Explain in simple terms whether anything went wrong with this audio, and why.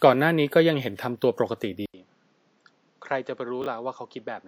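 The recording most likely switched to a poorer input device partway through, such as a different microphone or a headset's call mode, at about 1.86 s. At that moment there's a short gap of about 80 ms. From then to the end, the sound is narrower, with nothing above about 7.6 kHz, so it turns duller. It's also noticeably quieter and carries new background noise, though that noise stays well below the speech.

Chunks played out of order at 3.62 to 3.66 s. A 20 ms slice of audio was delivered or written one slot late, so it plays after the slice that should have followed it. Nothing is missing, but the order is wrong, which leaves three abrupt joins packed into that brief spot. The listener hears a tiny scrambled moment where the sound jumps unnaturally.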